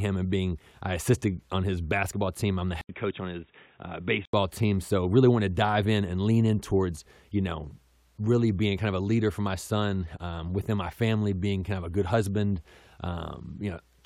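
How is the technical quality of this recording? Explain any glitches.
The recording has one clear glitch. From 2.81 s to 4.33 s the speech turns dull and boxy, with nothing above 3.8 kHz, drops a few decibels in level, and gains a faint new background noise. An 80 ms gap marks the change. This is likely an input switched to a poorer device, a narrower-band microphone or headset call profile, before the original input returns.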